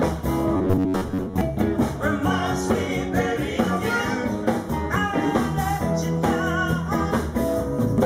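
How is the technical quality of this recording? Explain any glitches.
The recording has one clear glitch, early on.

Robotic sound from repeated short buffers, from 0.57 to 1.41 s: the sound turns into a rigid, metallic buzz at about 93.8 Hz that still loosely tracks what it replaces. The likely cause is new audio arriving too slowly, so the playback repeats the last short slice, which points to a buffer of roughly 10.7 ms, while most of the real audio in that stretch, around two thirds or more, is skipped.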